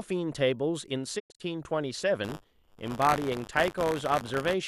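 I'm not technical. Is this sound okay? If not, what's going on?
No, there are two problems in it.

From 1.18 to 1.41 s there's a digital broadcast dropout. The receiver briefly lost good signal, so it muted, fading out in about 20 ms and leaving a few short holes, the longest near 0.1 s. Whatever speech fell in those gaps is simply gone.

From 2.23 to 4.54 s you'll hear buffer tearing: a robotic buzz at about 100 Hz riding on the speech. The playback software and the sound hardware have drifted out of step, so every hundredth of a second a small sliver of slightly older audio gets spliced in, with abrupt joins.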